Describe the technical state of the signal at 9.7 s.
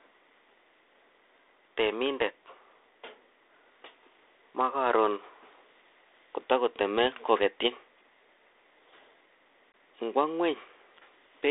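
At 9.72 s the call suffers packet loss on an ADPCM call: about 20 ms of audio never arrives, which fits a single lost packet, and the gap is filled with silence. Because G.726 at 32 kbit/s codes only differences from an adaptive prediction, the receiving decoder's predictor and step size drift out of step with the sender's. The result is a hard-edged hole, after which the speech resumes slightly distorted, settling within tens of milliseconds.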